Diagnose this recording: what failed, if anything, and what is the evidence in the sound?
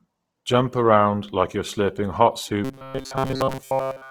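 Codec stage: the whole recording has a rough, grainy texture with no swirly spectral holes. That points to Opus compression in its music mode, likely at a low bitrate around 16 kbps.

Driver or buffer stage: from 2.65 s, just after "like you're slurping hot", to the end, robotic sound from repeated short buffers imposes a rigid 133 Hz buzz. This fits roughly 7.5 ms repeats replacing most of the real audio, unlike the codec's noisy graininess.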